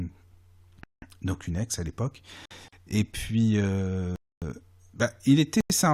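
A French speech clip with two kinds of dropout. Four blocks of digital silence cut the sound out and back with no fade: 0.84 to 1.02 s (about 186 ms, just before "donc une ex à", which fits an 8192-sample buffer), 2.45 to 2.51 s (53 ms, right after "une ex à l'époque"), 4.16 to 4.42 s (259 ms) and 5.61 to 5.70 s (93 ms, which fits a 4096-sample buffer). Each is a short hole in the audio. The cause is either a program not filling the output buffer in time or a calculation yielding invalid values. The buffer-sized lengths of two holes point to the former. On a spectrogram each shows as a fully blank vertical column with sharp, straight edges, and the waveform drops abruptly to a flat line. Separately, there is a gap at a join of encoded pieces at 2.68 to 2.73 s, about 42 ms, shortly after "une ex à l'époque". It fits pieces about 6 s long that were encoded separately and joined without trimming the encoder's start-up delay or the padding on its final frame, so that silence sits between them. 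The codec smears the edges, so the spectrogram shows a narrower blank strip with soft, blurred sides rather than clean cuts, and the speech resumes where it left off.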